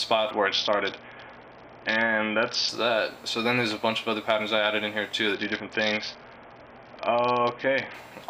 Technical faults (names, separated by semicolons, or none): Bluetooth SBC bit pool drop